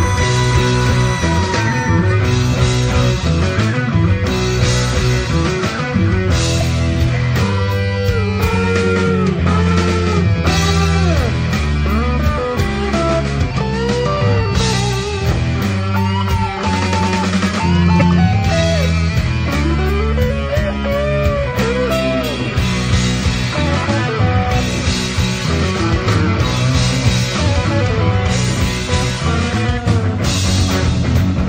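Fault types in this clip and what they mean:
Broken MP3 bit reservoir: two 30 ms glitches, at 6.60 and 17.99 s, likely from cut frames whose successors read borrowed data from the wrong frame.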